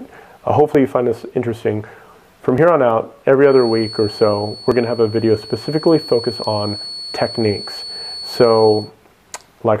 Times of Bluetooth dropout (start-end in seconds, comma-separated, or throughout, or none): none